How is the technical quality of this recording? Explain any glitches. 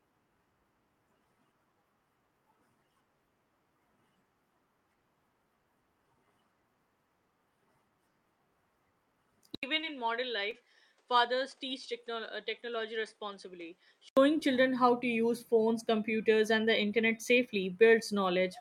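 The recording has two audible problems, both in the middle of the speech.

From 9.55 to 14.17 s, an 80 ms silence is followed by duller, roughly 10 dB quieter sound with a noise floor about 35 dB down and nothing above 9.8 kHz. This is likely an input switched to a poorer device. On a spectrogram the top band is flat-cut, and the waveform shrinks.

At 9.81–9.85 s and 10.51–10.54 s, short concealed packet loss appears as brief smears. About 20 ms never arrived, and the receiver extended the preceding sound to bridge it. The spectrogram shows smeared, repeated texture.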